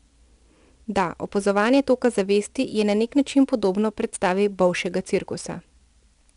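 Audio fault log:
Throughout: 4-bit ADPCM compression. A gritty hiss rides on every loud syllable and drops away in quieter moments, because each sample is coded as a coarse 4-bit step from a prediction. Steady background hiss would not track the level like this. Nothing is heard above about 10.6 kHz, which points to a sample rate near 22 kHz.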